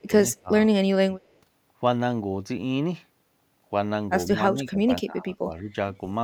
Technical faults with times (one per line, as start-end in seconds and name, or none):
0.00-0.51 speech suppressed in double talk
4.28-5.70 speech suppressed in double talk